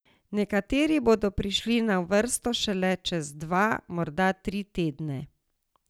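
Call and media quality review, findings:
Dropped samples at 2.14 s in speech: single sharp click. Likely cause: a fraction of a millisecond of samples lost in capture or buffer handling, so the waveform jumps to a later value. Spectrogram shows one thin vertical line spanning all frequencies.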